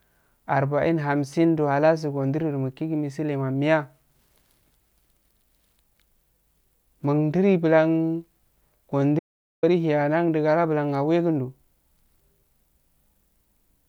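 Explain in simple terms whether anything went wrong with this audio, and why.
Something did go wrong, once. From 9.19 to 9.63 seconds the speech stops dead and the recording holds total silence for about 0.44 seconds, with not even the faint background hum of the room, before the speech picks up again mid-flow. This is an audio dropout to silence. The likely cause is that the input signal was briefly lost while recording carried on writing blank audio, so whatever was said in that gap is gone.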